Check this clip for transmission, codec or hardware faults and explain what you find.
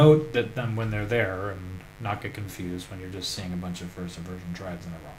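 One fault is present: mains buzz, running through the whole clip. Sharp switching spikes from a 50 Hz supply leak into the signal path twice per cycle. They form a stack of harmonics reaching several kHz. The result is a steady, raspy buzz roughly 25 dB below the sound.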